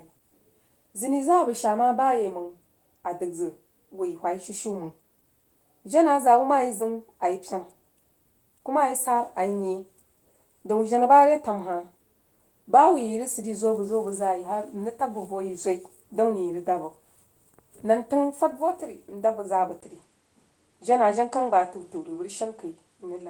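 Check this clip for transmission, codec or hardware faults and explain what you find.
One fault is present, near the end of the speech. At 19.81 s a brief gap of about 20 ms is followed by a sudden loss of top end: nothing is left above 10.2 kHz, where the Opus stream had carried content up to about 20 kHz, and a faint new noise floor appears at roughly 50 dB down, with little change in level. This is likely an input switched to a poorer device with narrower response and its own background noise, lasting to the clip's end. A codec bandwidth drop would step to 8 kHz without the gap or new noise.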